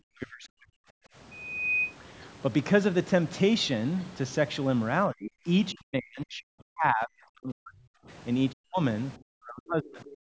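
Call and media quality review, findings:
Speech suppressed in double talk at 0.1–0.78 s, 5.08–5.47 s, 5.72–8.08 s, 8.52–8.82 s and 9.17–10.17 s. Near-end speech dips hard, up to roughly 40 dB. Likely echo canceller mistaking overlapping far-end audio for echo and attenuating both.

Background gated by the echo canceller, 1.06–1.15 s. Room tone drops by about 18 dB for roughly a tenth of a second, then returns. Canceller clamping the microphone while loudspeaker playback runs, then releasing.

Other side's voice leaking through, 10.07–10.11 s. Brief faint scrap of a second voice, roughly 25 dB below the talker. Likely residual loudspeaker echo the canceller failed to remove from the microphone path.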